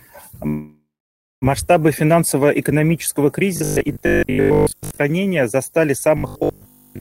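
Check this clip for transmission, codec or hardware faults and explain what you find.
Three faults are present: a constant coarse quantisation hiss, one freeze, and two robotic stretches.

Low bit depth with noise shaping runs throughout. The 9-bit quantisation error is pushed upward, giving a thin hiss around 30 dB below the speech that is brighter toward the treble, unlike flat broadband noise.

A call audio freeze occurs from 0.47 to 1.44 s. The speech stalls, fades into about 0.57 s of silence, and then resumes where it stopped, likely because the jitter buffer ran dry. Nothing is skipped, but everything afterward arrives 0.95 s late, unlike a dropout that loses sound.

Robotic sound from repeated short buffers occurs from 3.57 to 4.99 s and from 6.17 to 6.99 s. A rigid metallic 50 Hz buzz, which fits a likely 20 ms buffer being replayed, is heard while most of the real speech is skipped.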